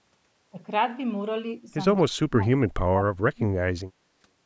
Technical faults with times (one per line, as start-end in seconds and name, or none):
2.05-4.10 speech suppressed in double talk